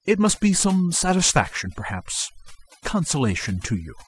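Speech, affected throughout by overdone noise removal: an aggressive noise reducer pulls individual frequency bands down whenever they sit near its noise estimate, so the background drops and breaks up into twinkling specks, while quieter parts of the voice vanish too.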